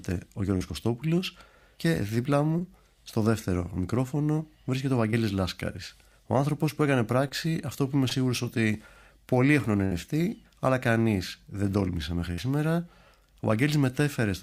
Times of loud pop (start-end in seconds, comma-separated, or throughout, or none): none